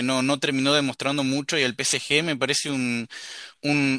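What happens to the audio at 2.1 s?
Nothing goes wrong at 2.1 s; the speech there is intact, with no dropout, click, distortion or other fault.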